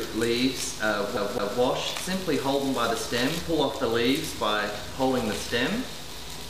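A CD stuck on one turn: a scratch makes the laser jump back a track at the same point on each revolution of the disc, so from 1.17 s to 1.59 s the player keeps returning to the same stretch instead of moving forward. The result is a segment of about 0.21 s of audio playing twice in a row, each jump marked by a brief mute, giving the quick, regular stutter of a skipping CD.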